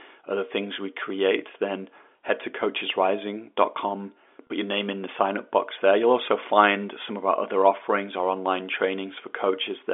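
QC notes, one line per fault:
4.47–4.50 s, packet loss with pitch repetition: about 30 ms of audio went missing, fitting one lost packet. The receiver repeated the last pitch period, giving a brief held, buzzy sound just before "your name in the".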